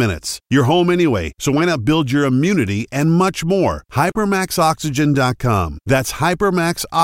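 Listening to the speech recording, nothing stood out as a technical fault at any point.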